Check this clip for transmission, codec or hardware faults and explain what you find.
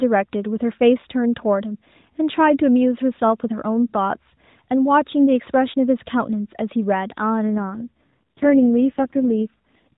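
One fault stands out: an AMR rate drop near the end of this narrowband mobile speech. From 7.48 s to 9.94 s the voice turns rougher and more synthetic. The band stays the same and nothing drops out. The link likely weakened, so the network moved the codec to fewer speech bits and more error protection. The change fits a fall from 12.2 to 4.75 kbps.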